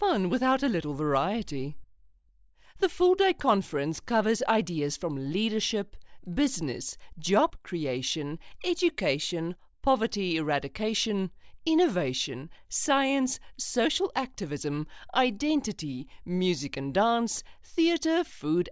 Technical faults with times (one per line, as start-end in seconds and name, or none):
none